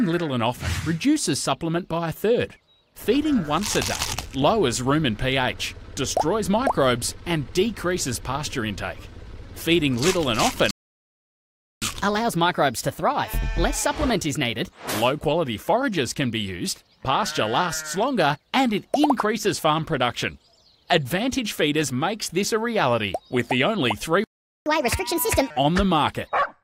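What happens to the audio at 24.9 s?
At 24.9 s the audio is in a catch-up at higher speed, running from 24.66 to 25.50 s. After a stall, the player resamples its backlog at 1.5x to recover lost time, so the sound plays noticeably faster and about seven semitones higher before returning to normal.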